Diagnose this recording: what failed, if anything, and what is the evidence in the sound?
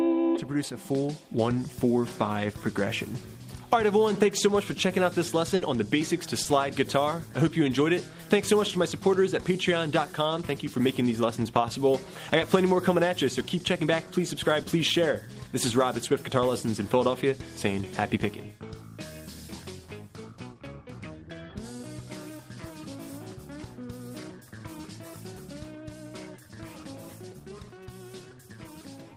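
The failure is in the network stage, as a burst of packet loss at 5.55 to 5.63 s. For about 60 ms, the receiver had nothing to decode. It filled the hole by extending the last sound it had and letting it fade, so a held, dimming tail replaces the real audio. When the audio returns, it has jumped ahead. The 60 ms in between is simply gone.

There is also a short concealed packet loss at 6.43 to 6.47 s, again a network fault. About 20 ms arrived too late to play. The decoder covered it by continuing the preceding sound, then blended back into the real signal. The result is a brief smear or wobble rather than a clear gap. Any very short sound in that spot may be lost. The cause is late or dropped packets.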